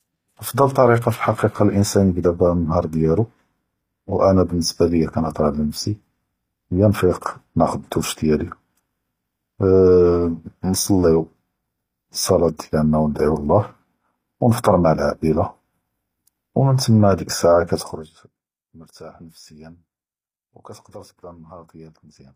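Throughout the speech, s sounds turn gritty and metallic, with nothing above 15.4 kHz. The likely cause is HE-AAC compression at about 24 kbps, and a spectrogram shows coarse, copied treble bands.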